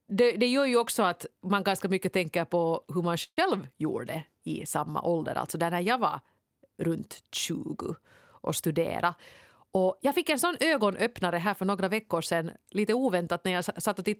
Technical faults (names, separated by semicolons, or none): call audio freeze; jitter buffer speed-up